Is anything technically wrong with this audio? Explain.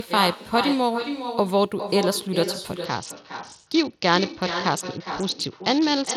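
Yes, there are two faults in this speech.

Throughout, there is echo with no canceller: the far end's loudspeaker feeds its microphone, returning each phrase about 9 dB quieter after roughly 0.4 s. The waveform shows quieter delayed repeats of every burst.

From 2.85 s to the end, a Bluetooth SBC bit pool drop, consistent with the pool falling from 28 to 7 (about 66 kbps), starves the upper sub-bands. The treble dulls and grit rises, and the spectrogram's top band thins out.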